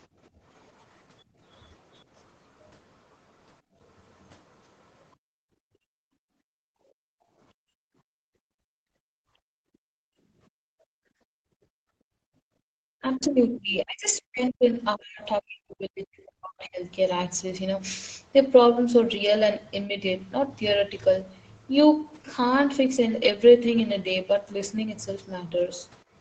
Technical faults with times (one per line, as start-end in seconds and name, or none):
0.30-0.41 background gated by the echo canceller
1.24-1.40 background gated by the echo canceller
3.62-3.79 background gated by the echo canceller
5.16-12.72 background gated by the echo canceller
13.00-16.82 speech suppressed in double talk
15.59-15.63 short concealed packet loss
15.93-15.97 short concealed packet loss